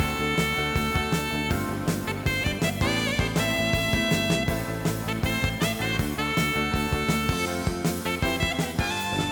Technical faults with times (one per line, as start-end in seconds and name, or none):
none